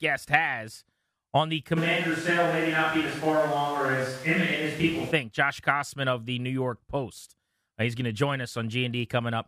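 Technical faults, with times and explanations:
1.78 to 5.10 s, switch to a distant microphone: speech turns suddenly hollow and thin, likely picked up far away. The spectrogram loses low end, and the background rises to about 20 dB below the speech.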